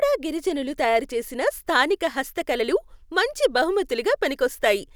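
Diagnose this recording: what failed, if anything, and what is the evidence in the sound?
No failure found at any stage of this recording.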